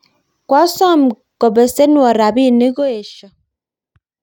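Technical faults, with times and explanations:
2.67–3.30 s, zipper noise: the level is pulled down by roughly 25 dB in unsmoothed 1 dB jumps, about 40 per second, instead of a continuous fade, so each jump leaves a small click and the speech carries a rapid ticking, zipping texture while it drops.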